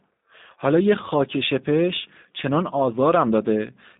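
Throughout, the speech has passed through a G.729 codec, whose character fits the 8 kbit/s G.729A variant. It rebuilds the speech from a vocal tract model and sparse pulses, so it sounds plainly rough and synthetic, confined to about 150 Hz to 3.7 kHz, with nothing above 3.8 kHz.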